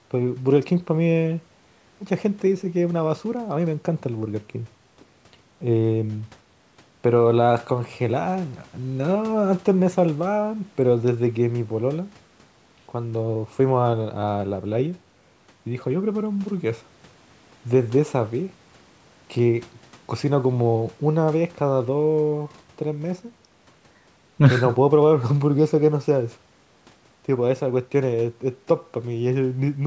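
No faults are audible in the speech, with the expected call microphone processing trimming the lowest bass and leaving nothing above 8 kHz.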